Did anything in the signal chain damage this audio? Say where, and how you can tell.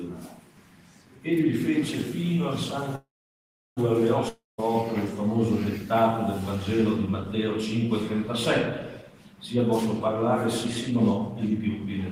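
Yes, at the network and jitter buffer stage, in three ways.

From 2.95 to 3.79 s the sound stops moving forward: the last fragment is carried on as a fading buzz, and about 0.69 s of that stretch is near silence. When it resumes, it picks up exactly where it left off, with nothing skipped. This is a call audio freeze, likely caused by packets being held up until the jitter buffer ran dry. The receiver padded 0.81 s, and everything afterwards plays that much later.

From 4.29 to 4.60 s there is a similar buzzing tail that fades to roughly 0.16 s of silence. This time, though, the audio comes back further along, with about 0.3 s of material gone. That jump is the sign of a long network dropout. The receiver concealed the 0.29 s gap with extrapolated sound, but the packets for that stretch were likely never played, so the lost portion is simply absent instead of delayed.

From 9.54 to 10.23 s the audio runs about 11% fast, and from 10.65 to 12.03 s about 14% fast, while the pitch stays where it was. 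The result sounds hurried. This is jitter buffer speed-up: with too much audio queued, the receiver repeatedly cut out short pitch-period slices to shrink the delay. It removed roughly a tenth of a second in the first run and about a fifth in the second.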